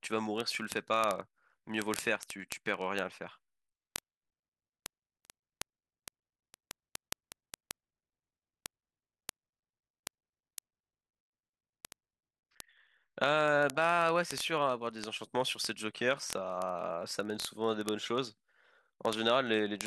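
From 0.11 s right through to 19.86 s the speech carries word clock ticks: sharp clicks roughly every 20 ms, uneven in strength. The receiver's clock drifts about 1000 ppm from the sender's, so every slip drops or repeats one sample, hundreds of times.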